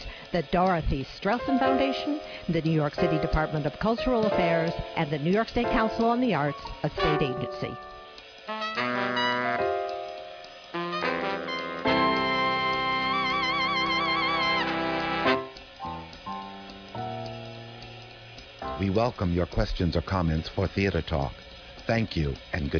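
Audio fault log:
No faults detected; the audio shows no dropouts, discontinuities or other technical defects.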